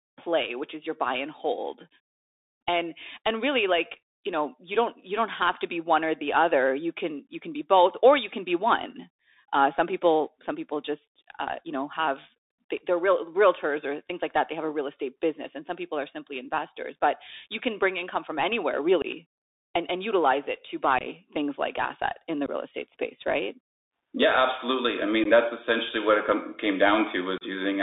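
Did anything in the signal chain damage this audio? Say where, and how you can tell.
Yes. The codec stage damaged it throughout. This is the Bluetooth CVSD headset codec. Its one-bit, 64 kbps slope tracking leaves sound only between 250 Hz and 3.7 kHz, with scratchy sibilants and a granular hiss.

The Bluetooth link also shows unconcealed Bluetooth headset packet loss. Abrupt holes come after "bring income from anywhere" at 19.02–19.05 s and between "and utilize it to" and "things like asset in" at 20.99–21.07 s. Three more fall at 22.46–22.49 s, at 25.24–25.27 s before "that's essentially what it", and at 27.38–27.43 s. Lost voice packets were never filled in.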